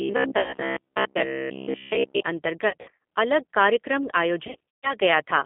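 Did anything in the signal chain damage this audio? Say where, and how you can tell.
Yes. At the codec stage, G.729 coding at 8 kbit/s confines the audio to roughly 200 Hz to 3.5 kHz and rebuilds it from pulses, giving plainly audible rough, synthetic speech throughout.

In the driver or buffer stage, from 0.02 to 2.23 s a rigid 66.7 Hz buzz sits on the speech. Most of the audio there is repeated, which points to short buffers of about 15 ms being likely replayed in place of late audio: robotic sound from repeated short buffers.

On the network, VoIP packet loss concealed by the speech codec occurs at 0.40 to 0.56 s, 2.69 to 2.97 s just before "अलग कार्यक्रम", and 4.47 to 4.94 s just after "अलग कार्यक्रम". The decoder extrapolates buzzy, fading tones across losses totalling about 80, 180 and 240 ms, the last two scattered over about 360 ms each, and the longest of these holes lasts 140 ms.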